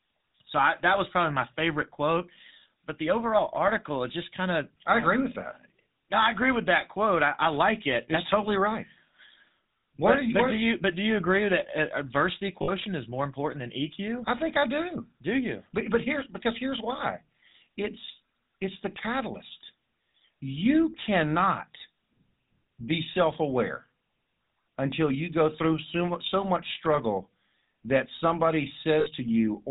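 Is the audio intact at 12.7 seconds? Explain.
No. From 12.62 to 12.70 s, between "agree that uh adversity" and "is more important than", lost GSM frames were concealed by repeating the last good frame. The result is a rough, metallic ring, consistent with three 20 ms frames. On a spectrogram it shows as a smeared, static band; on the waveform, a repetitive patch. The GSM full-rate codec is also active there, giving a buzzy, gravelly roughness, with nothing above 4 kHz on the spectrogram.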